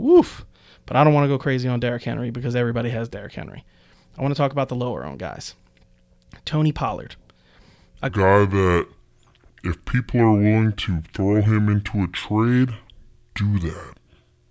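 From 8.09 s, a wrong sample rate, which fits 24 kHz audio played at 16 kHz, slows speech to 0.67 speed, pitch down 7 semitones.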